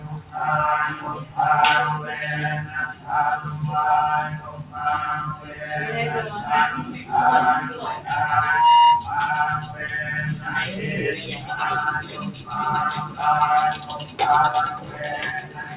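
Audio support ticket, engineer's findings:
Noise suppressor applied to music or sounds: whole clip pumps and thins, level swinging by something like 10 dB. A speech-tuned suppressor left on is reading steady tones and tails as noise and ducking them while attacks slip through.

Sound cut by the noise suppressor: held and decaying sounds dip hard at 0.00–1.38 s, 2.66–3.09 s, 4.34–5.65 s, 6.86–8.07 s, 9.62–10.47 s and 11.38 s to the end. Drops reach about 8 to 11 dB, with tails chopped short.

Loudspeaker feedback squeal: a 949 Hz tone swells over roughly 0.3 s from 8.41 s to 9.17 s and sits around 5 dB above the rest. Mic is hearing its own speaker, and loop gain tips past one at that frequency. Top end stops at 4 kHz, which points to a narrowband G.711 call path.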